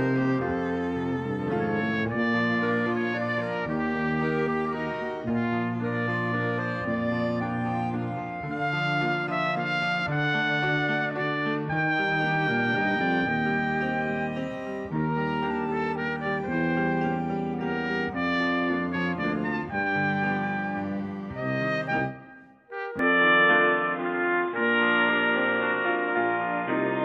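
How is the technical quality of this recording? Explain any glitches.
The recording holds up until 22.99 s, where it abruptly loses its top end and keeps that restricted character to the end. From that point nothing above 3.8 kHz remains, so the sound turns dull and boxy. The level also shifts by a few decibels, and a fresh, faint background noise floor appears beneath it. There is no gap at the transition. The likely cause is the input switched to a poorer device, such as another microphone or a headset's call profile, whose narrower passband and own electronics replace the original path. A simple filter or EQ change would cut the highs too, but it would not also bring in a new noise floor and a level step. That combination is what marks a change of device.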